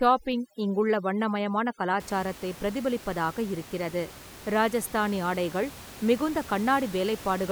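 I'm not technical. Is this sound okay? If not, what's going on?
No. Overdone noise removal affects the first two seconds, from 0.0 to 2.0 s. A cleanup tool meant to hush background hiss was set far too strong, so it switched off any slice of the sound it judged to be noise, and softer parts of the speech went too. The background drops and breaks up into twinkling, warbling specks. The room's ordinary background noise stays well under the voice.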